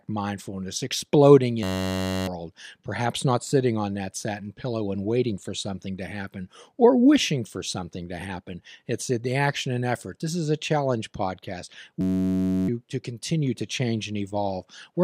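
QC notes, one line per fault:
1.63–2.27 s and 12.01–12.68 s, system hang loop: right after "mindfulness exploding" and "is a challenge podcast", a 10.67 ms slice repeats, so you hear a flat 94 Hz buzz. It sounds like a stuck 512-sample buffer, and roughly 0.7 s drops out each time.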